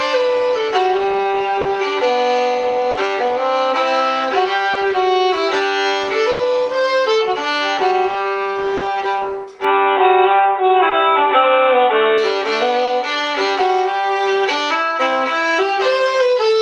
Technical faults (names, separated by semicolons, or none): short concealed packet loss; burst of packet loss; input switched to a poorer device